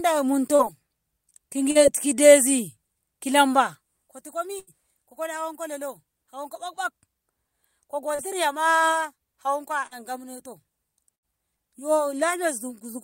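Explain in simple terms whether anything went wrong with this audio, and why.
Four times the speech briefly smears or wobbles for a split second, at 0.55, 1.71, 8.15 and 9.87 s, and a tiny bit of a sound may slip past unheard. This is short concealed packet loss. Each time about 40 ms of the call arrived too late or not at all, and the receiving end papered over the hole by stretching out the sound just before it, then blended back into the real speech.

Twice the sound stalls longer, into a held buzz or fading hiss, then jumps ahead: at 4.59 s, just before "ko kola", and at 11.15 s. This is a burst of packet loss. Roughly 80 ms went missing in one go, too long to hide smoothly, so the receiver kept the last sound going while turning it down. When real audio returned, the piece in between was simply gone.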